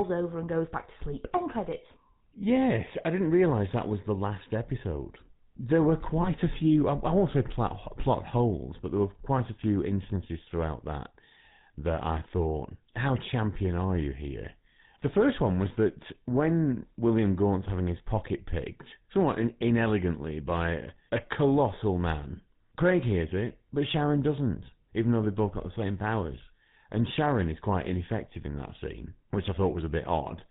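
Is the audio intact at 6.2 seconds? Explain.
No. A lost GSM frame falls between 6.22 and 6.28 s. The gap sounds like one 20 ms frame going missing. The decoder fills it by reusing the settings of the last good frame. You hear a brief rough, metallic ring where the sound should continue. The gap is short, so the ring is cut off before it can fade toward silence.

The moment is also shaped by the GSM full-rate codec, which runs through the whole clip. Its coarse sound fits the 13 kbps full-rate coder. This codec models the vocal tract and drives it with regularly spaced pulses. It keeps only a thinned-out excitation and passes nothing above 4 kHz. The damage is plainly audible as a buzzy, gravelly roughness on the speech, with no top end.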